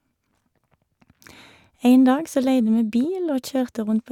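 No technical faults can be heard anywhere in this short speech recording, and the signal stays continuous and intact throughout.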